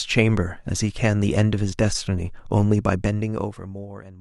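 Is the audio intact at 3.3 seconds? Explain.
No. Zipper noise runs from 2.94 s to the end. The speech falls by roughly 25 dB in unsmoothed steps, about 100 per second, causing a fine ticking buzz.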